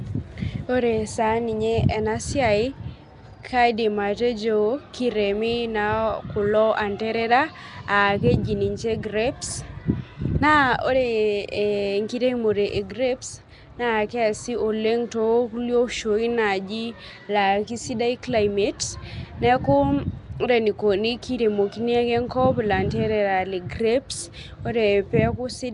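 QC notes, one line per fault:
Throughout: Nellymoser compression. The speech carries a rough, hissy halo with a smeared, underwater texture, and nothing is present above about 10.6 kHz. This is likely the Flash-era Nellymoser Asao codec, which fits a rate around 44 kbps: it codes short blocks at a fixed, low bit budget, so weaker bands receive no bits and are replaced with noise, producing the grainy haze and blurred transients, while the top of the spectrum is dropped entirely.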